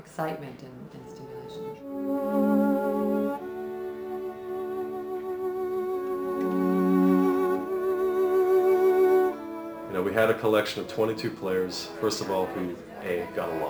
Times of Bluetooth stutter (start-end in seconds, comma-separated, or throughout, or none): none